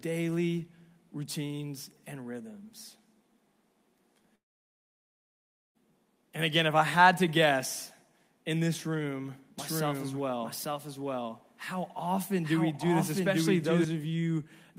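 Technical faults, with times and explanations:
4.35 to 5.77 s, long network dropout: about 1.4 s of sound goes missing. The last bit smears into a short fading buzz, then it's basically silence until the audio picks up again further on. Likely a stretch of packets that never arrived.
9.59 to 13.85 s, doubled audio track: right after "guess in this room", a second full-band copy trails about a second behind at roughly the same level, dry with no room colour, cutting in and out abruptly. Likely a second, slower capture path mixed in.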